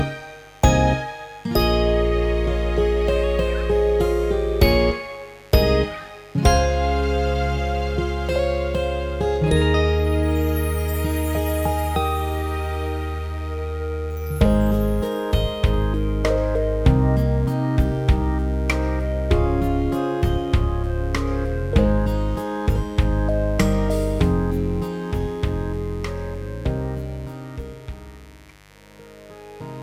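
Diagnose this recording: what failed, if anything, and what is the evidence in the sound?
A mains buzz runs through the whole recording, a steady raspy buzz sitting roughly 30 dB below the signal. The failure is in the analogue wiring: sharp spikes from a dimmer, rectifier or unshielded run enter twice per 50 Hz cycle, spreading harmonics into the kilohertz range.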